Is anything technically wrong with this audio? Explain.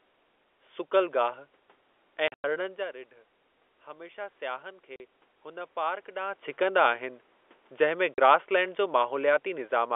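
Yes. Two kinds of fault are audible.

Packet loss filled with silence occurs three times. The first is scattered across 2.28 to 2.44 s, just before "जा रिढ". It totals 140 ms, and its longest hole runs 100 ms. Shorter 40 ms holes follow at 4.96 to 5.00 s and 8.14 to 8.18 s. Lost packets were replaced with pure silence. The gap sizes fit 20 ms packets. The speech drops out abruptly.

Automatic gain rising runs from 3.86 to 6.48 s. The speech input fell by about 13 dB. The gain control responded by slowly adding about 4 dB. Voice and room noise swell together over more than two seconds. The level creeps upward rather than jumping.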